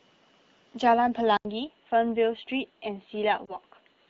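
At 1.37 s there is a gap of 80 ms, after which the speech loses everything above 4.3 kHz, drops a few dB in level and carries a faint new noise floor well below the signal. This was likely an input switched to a poorer device that persists to the end of the clip.

From 3.46 to 3.56 s a brief dip and warble interrupts the speech, consistent with lost AMR speech frames, which fits a single lost 20 ms frame. The decoder extrapolates from the last good frame at reduced gain before recovering, while the surrounding AMR-WB coding at 12.65 kbit/s stays clean.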